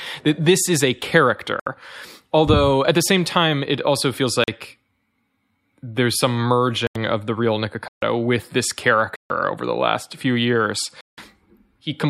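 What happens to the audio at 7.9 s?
A block of digital silence runs from 7.88 to 8.02 s: about 141 ms of the speech was replaced by zeros. Because it cuts out and back in with no fade, it is heard as a short, dead hole.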